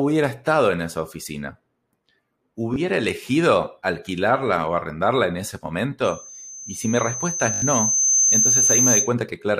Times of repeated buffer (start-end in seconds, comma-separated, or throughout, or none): 2.74, 7.54-7.62